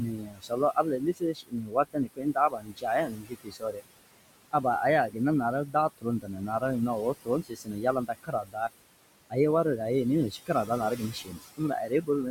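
Noise suppressor artifacts run through the whole clip: the suppressor pulls the background, room noise sitting about 15 dB under the speech, down by about 20 dB between phrases, so the noise floor pumps up under speech and drops away in gaps.

Speech cut by the noise suppressor occurs from 0.00 to 3.81 s, 5.66 to 6.62 s, 7.14 to 8.70 s and 10.31 to 12.09 s. The suppressor mistakes quiet parts of the speech for noise and turns them down with it, by up to about 21 dB (about 17 dB in the last span). Roughly two seconds are affected in the first span and about 0.4, 0.7 and 0.5 s in the later ones, where soft consonants and word endings sound swallowed or faint.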